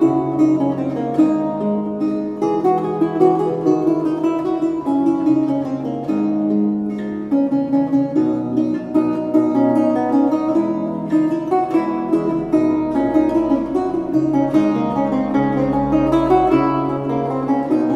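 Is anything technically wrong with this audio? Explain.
No, nothing technically wrong can be heard in this audio. Nothing in the signal points to a problem in how it was captured, processed or delivered.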